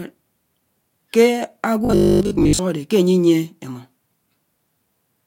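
From 1.85 to 2.59 s the speech turns into robotic sound, a rigid 50 Hz metallic buzz, likely from repeated 20 ms buffers replacing most of the real audio.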